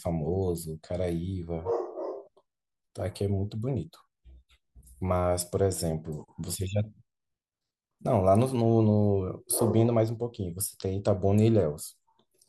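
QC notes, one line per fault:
Nothing stood out on listening to this speech recording.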